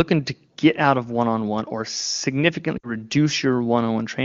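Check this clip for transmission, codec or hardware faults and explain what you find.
One transmission fault is audible. From 2.77 to 2.93 s there are lost AMR speech frames: about 60 ms of concealment, consistent with three 20 ms frames. The decoder repeats its last good speech parameters while ramping gain down, so the sound smears briefly and fades before recovering slightly rough. The wideband codec itself sounds clean, consistent with a high AMR-WB rate.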